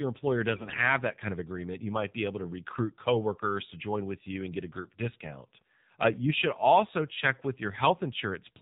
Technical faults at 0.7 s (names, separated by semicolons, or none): AMR narrowband mobile codec; AMR bit errors